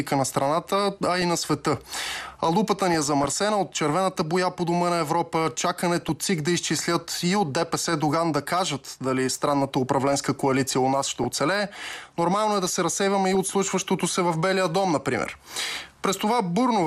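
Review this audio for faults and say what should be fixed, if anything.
MP2 compression, likely at a low rate around 80 kbps, runs throughout: the encoder has too few bits for its 32 sub-bands, so upper bands switch off and the remaining ones are quantised coarsely. The sound is dull and topless, with a granular, gurgling roughness that flickers as bands drop in and out from one frame to the next. To prevent it, encode at a higher bitrate or use a more efficient codec.

DAB burbling appears five times: 0.99 to 1.23 s, 2.92 to 3.37 s, 6.00 to 6.09 s, 11.10 to 11.28 s and 13.25 to 13.37 s. Weak reception let bit errors, a fraction of a percent, slip past error correction into the audio frames, corrupting samples and scale factors so individual sub-bands jump in level for up to a frame. The result is short blips of noise in single sub-bands over the sound. To prevent it, improve reception with a better antenna, position or signal strength, or use stronger error protection.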